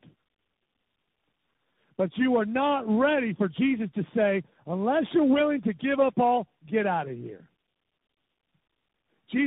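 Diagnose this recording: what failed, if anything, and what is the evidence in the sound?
Tandem speech coding at the codec stage: the speech is rough, muffled and warbly throughout, with nothing above 3.8 kHz. That points to three speech coders in a row, probably ending in CVSD. The layered damage is worse than any single codec would leave.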